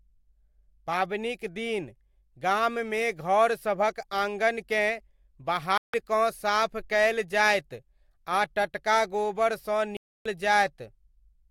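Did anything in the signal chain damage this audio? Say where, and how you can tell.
Yes, there's a digital broadcast dropout at the reception stage. The speech drops to silence from 5.78 to 5.94 s, about 160 ms, and again from 9.97 to 10.26 s, about 290 ms, then picks straight back up further along. The receiver lost frames or saw them fail their checksum and muted until clean ones arrived, so those gaps fit a handful of whole frames going missing each time. Whatever was broadcast then is simply gone.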